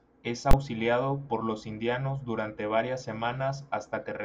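At 0.51 s the speech is interrupted by invalid numbers at full scale, lasting until 0.53 s. A calculation produced infinite or undefined values, which were pinned to the extreme positive or negative sample value for about 21 ms, which fits a 1024-sample processing block. Because the block is so short, it is heard as a single loud bang. The waveform shows a flat slab held far beyond the speech peaks, and the spectrogram shows a bright vertical stripe at each edge.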